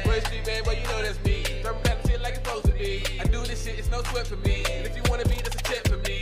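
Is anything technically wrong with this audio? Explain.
No, nothing technically wrong can be heard in this audio.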